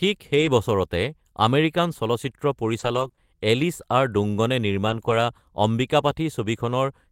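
From 0.37 to 0.47 s there is a lost packet rebuilt from error correction. A few packets went missing. The next packets carried low-bitrate copies, and the decoder played those instead. About 60 ms of speech was rebuilt. There is no gap, but that stretch sounds rougher and noisier.

From 2.79 to 5.13 s come scattered short gaps. About three small holes appear, totalling 60 ms of missing audio. The longest runs around 20 ms. The receiver filled each by stretching the previous sound. They come through as brief ticks and hiccups in otherwise clear speech.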